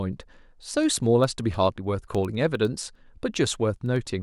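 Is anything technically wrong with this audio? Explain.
Yes. Word clock ticks run from 0.13 to 4.17 s, about every tenth of a second, as an unlocked receiver slips one sample, fitting roughly 200 ppm clock mismatch. Their steady rhythm, not random timing, marks them apart from ordinary clicks.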